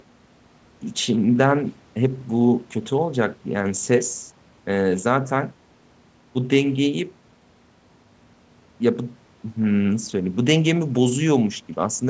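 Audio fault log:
No faults appear in this audio fault log for the speech clip, which passed through call microphone processing with nothing above 8 kHz.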